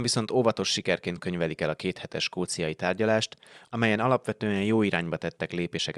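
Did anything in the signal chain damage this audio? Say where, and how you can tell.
No, nothing in the signal chain damaged this audio.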